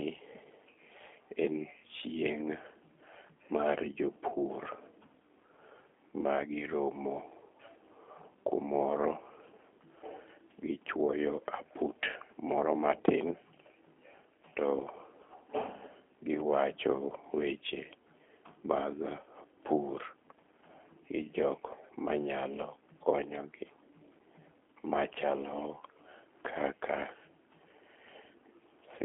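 From start to end, the speech passes through a G.729 codec at 8 kbit/s. Nothing survives above 3.6 kHz, and the voice sounds rough and plainly synthetic.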